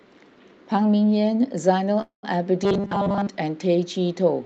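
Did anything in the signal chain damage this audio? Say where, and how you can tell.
Yes. From 2.01 to 2.25 s there is a call audio freeze, likely caused by network packets arriving late and the jitter buffer running empty. The last sound is stretched into a fading buzz for about 100 ms, then goes silent for about 120 ms. On a spectrogram this appears as smeared, flat bands dying to a blank column. The speech then resumes intact, about 217 ms late.

From 2.64 to 3.28 s there is robotic sound from repeated short buffers, likely a buffer-stage underrun. Most of that stretch is short slices played over and over while new audio is skipped. The waveform shows identical 5 ms cycles, and the spectrogram shows rigid harmonic lines stacked on a 200 Hz buzz.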